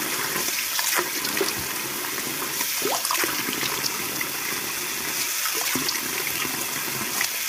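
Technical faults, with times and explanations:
Throughout: low-delay AAC compression. The audio has a heavy rough, grainy texture, with a noisy fizz filling the gaps between tonal components and a thin, artificial-sounding top band. This is likely AAC-ELD coding at a low rate, consistent with roughly 24 kbps. Its short frames of about 10 ms give coarse frequency resolution, so closely spaced harmonics smear together. The scarce bits leave quantisation noise between them and force the upper band to be approximated rather than coded.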